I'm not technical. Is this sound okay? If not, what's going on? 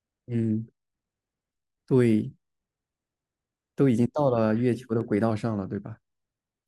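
No. From 5.30 to 6.37 s the speech suddenly slows about 6% and drops about a semitone, then snaps back: likely a drift correction step, one abrupt jump rather than a gradual wobble.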